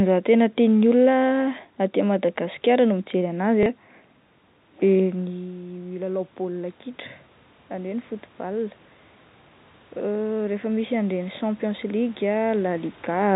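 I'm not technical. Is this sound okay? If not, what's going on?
No. At 3.63 to 3.66 s there's a small blip. That's packet loss with the last packet repeated: a tiny piece of sound went missing and the previous piece was replayed to fill the gap. From 4.99 to 6.83 s the sound, background included, swells up gradually. That's automatic gain rising, where the system turned up its volume to make up for the talker moving away from the microphone at around 5 s. The same slow swell happens again from 10.01 to 13.31 s.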